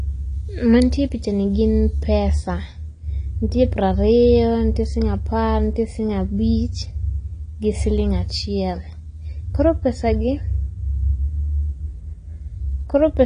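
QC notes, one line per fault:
Throughout, AAC compression: the speech sounds dull and smeared, with a fizzy, warbling texture on sibilants and held vowels. This is likely low-bitrate AAC-LC coding, with a strength of damage that fits about 32 kbps. The encoder lowers its top cut-off and quantises coarse frequency bands, leaving gaps or substitute noise. Unlike a plain low-pass filter, the loss is uneven and restless, with swirling artefacts rather than a clean, steady dullness.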